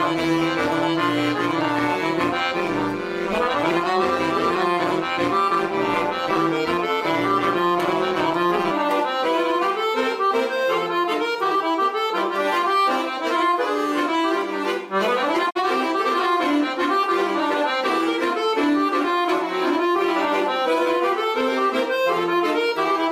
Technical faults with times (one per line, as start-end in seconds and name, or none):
0.00-8.71 overlap-add ripple
15.49-15.60 digital broadcast dropout